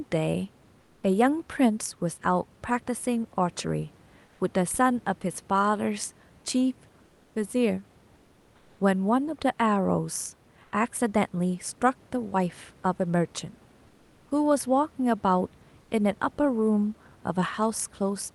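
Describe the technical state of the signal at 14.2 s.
At 14.2 s the sender has likely stopped transmitting during a pause, as Opus discontinuous transmission does, and the receiver is filling the gap with generated comfort noise in place of the background. The substitution runs from 13.87 to 14.31 s, about 440 ms. The real room background, sitting about 34 dB below the loudest speech, gives way to a flat, featureless hiss about 3 dB quieter until the genuine background returns at 14.31 s.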